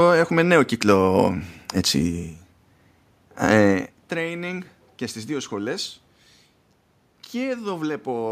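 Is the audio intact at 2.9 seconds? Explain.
Yes, the speech is intact at 2.9 seconds, with only the background noise of the room present, which belongs to the recording rather than being a fault.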